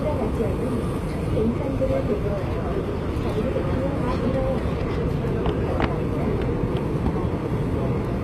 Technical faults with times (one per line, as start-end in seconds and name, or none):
0.00-8.23 HE-AAC compression